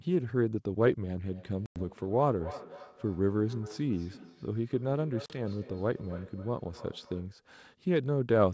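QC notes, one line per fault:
1.26 to 7.39 s, feedback echo between two devices: a second copy of the sound trails the original by about a third of a second, peaking at about 18 dB below the direct sound. Two devices in the same room are on this call, and one plays back what the other's microphone sent. That microphone catches the playback and returns it, because each echo canceller only removes audio from its own loudspeaker, so the delayed copy goes unsuppressed.
1.66 to 1.83 s and 5.26 to 5.40 s, packet loss on an ADPCM call: the first is a hard-edged gap of 100 ms, which fits a handful of lost packets, and the second is 40 ms, about two packets. Silence fills each hole. The G.722 stream is ADPCM-coded at 64 kbit/s, and the decoder's predictor and step size drift out of step with the sender's across the gap. The sound therefore resumes slightly distorted before realigning within some tens of milliseconds.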